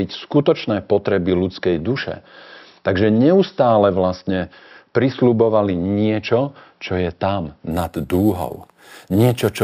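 From 7.71 s, right after "niečo čo je tam", to the end at 9.63 s, the speech shows imaging from sample-and-hold upsampling. Samples at 12 kHz were repeated up to 44.1 kHz without smoothing. A mirrored copy of the speech spectrum sits at 6 to 12 kHz, about 23 dB below the signal, and is heard as a metallic fizz that tracks the speech. A spectrogram shows that copy as a reflected band above 6 kHz, and the waveform shows a staircase of steps.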